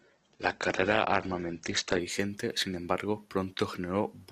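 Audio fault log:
0.0–2.0 s, adaptive stream starting at a low bitrate: the player opened on a lean version to start fast, so the speech is dull with nothing above 8.2 kHz and smeary codec artefacts. Once it had measured the connection it switched cleanly up just before "sin embargo", which fits an Opus step from around 12 to 64 kbit/s.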